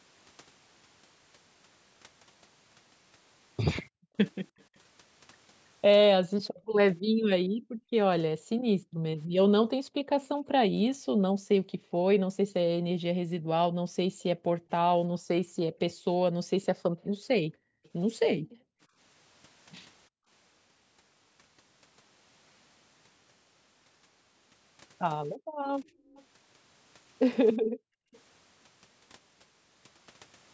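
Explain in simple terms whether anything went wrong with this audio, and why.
The call's echo canceller repeatedly clamped down on the microphone, a fault called background gated by the echo canceller. Between 3.89 and 20.29 s, for about seven seconds in total, and again between 25.37 and 28.12 s, for about a second, the room sound dips sharply or vanishes, then returns.

There is also an echo leak. A faint, delayed copy of the speech trails behind it from 4.58 to 7.28 s, from 16.64 to 17.9 s and from 26.1 to 28.2 s, arriving about a third of a second late each time. The likely cause is an echo canceller on a loudspeaker call that failed to remove everything its microphone picked up, so some of it was sent back.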